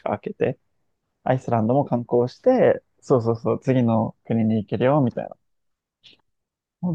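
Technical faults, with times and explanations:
No technical faults are present in this speech recording, and the signal carries through its whole length without interruption or audible damage.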